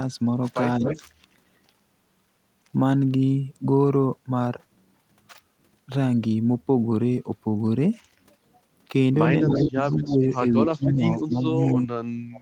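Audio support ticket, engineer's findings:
Speech suppressed in double talk: likely echo canceller failing to separate near talker from loudspeaker echo during overlap, attenuating both. Speech dips at 0.79–1.02 s (about 10 dB), 9.45–9.79 s (about 20 dB), 9.99–10.26 s (about 10 dB), and from 10.6 s to the end (up to about 35 dB).

Echo leak: likely residual loudspeaker pickup passing the far-end canceller and returned. Delayed copy, 238 ms behind, at 0.85–1.0 s and 11.7–11.75 s (about 10 dB below speech), and faint scraps at 9.82–9.95 s and 10.32–10.38 s (about 30 dB down).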